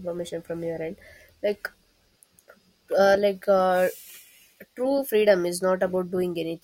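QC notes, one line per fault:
Nothing to flag here; the speech comes through without any problem I could hear.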